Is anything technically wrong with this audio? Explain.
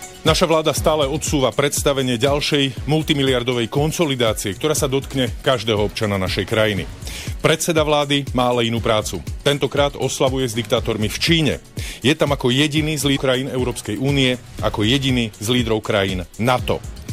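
Yes. From 13.13 to 13.19 s there is damaged data in a compressed stream. Part of the encoded data is corrupt, so the decoder misreads those frames and loses sync while hunting for the next valid header. It comes through as a brief chirp, squawk, click or short hole lasting about 66 ms.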